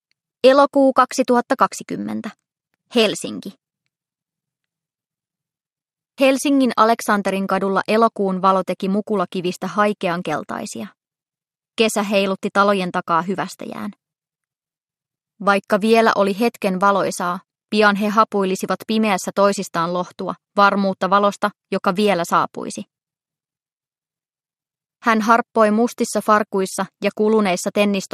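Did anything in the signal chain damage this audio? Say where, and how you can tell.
Yes, at the codec stage, throughout the clip. The sound is dull, with gurgling, granular distortion and upper bands flickering in and out, which points to a low bitrate of about 80 kbps and likely MP2 compression starving its sub-bands of bits.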